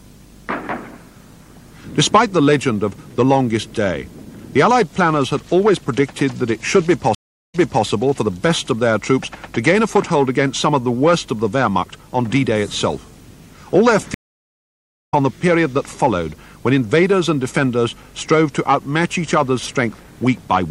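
From the start, the sound is watery and swirly. Treble stops at a fixed ceiling. Sharp attacks smear, and bright high sounds chirp metallically. This is likely MP3 compression, at a rate that fits about 64 kbps. With too few bits, the encoder drops the top band and lets weak frequency lines flicker on and off between frames.

At 7.15 s a stream reconnect occurs. The audio goes silent for about 0.39 s. It resumes at 7.85 s, but 0.31 s earlier in the material, so a short stretch repeats. The player lost its connection, rejoined, and the server resent recent data to a fresh decoder.

A second stream reconnect comes at 14.14 s. This silence lasts nearly a second. Playback returns at 15.14 s about a second further on, so that stretch of sound is skipped entirely.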